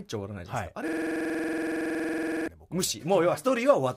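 From 0.88 s to 2.48 s, a system hang loop occurs: the computer or audio driver stopped feeding new data, but the sound hardware went on replaying the same ring buffer. A single 46 ms slice of the speech repeats exactly, about 34 times, at 21.5 Hz, which fits a 2048-sample buffer. At that rate the repetition merges into a rough, rapid buzz that freezes the speech in place for about 1.6 seconds before normal playback resumes.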